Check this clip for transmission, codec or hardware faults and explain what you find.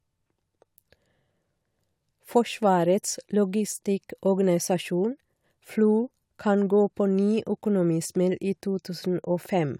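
Nothing in the signal points to a transmission, codec or hardware problem; the speech comes through with steady level and continuous timing throughout.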